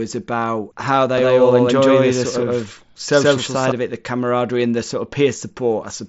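From 1.18 s to 3.72 s the speech turns into a hard slapback: every syllable lands twice, the second copy about as loud as the first and trailing by a fixed gap of roughly 150 ms, dry and full-band, with no room tail. It cuts in and out abruptly at both ends. This doubled audio track likely comes from the same signal being mixed in a second time through a slower path. The band stays capped near 7.7 kHz from the mSBC headset link.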